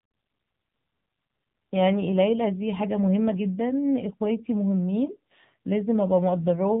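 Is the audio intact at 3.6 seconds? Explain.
No. At 3.6 seconds the speech carries the AMR narrowband mobile codec damage that runs through the whole clip. The codec rebuilds speech from a vocal-tract model excited by a few pulses per 5 ms subframe, so nothing above 4 kHz survives and the voice turns plainly buzzy and synthetic, which fits a low rate near 7.4 kbps. A plain telephone band-limit would only sound muffled. This has a mechanical, pulse-driven roughness too.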